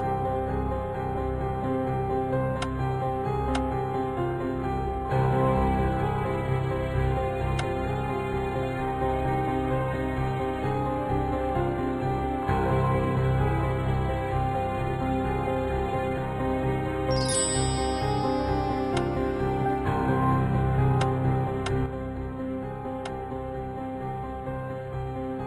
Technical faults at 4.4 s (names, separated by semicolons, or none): none